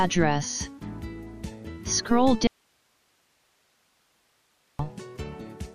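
At 2.47 s the sound cuts out abruptly and returns at 4.79 s, an audio dropout to a faint residue lasting about 2.32 s. Only hiss remains, roughly 45 dB below the signal, likely because the source was lost while the downstream path stayed live. Unlike a pause or fade, both edges are sudden.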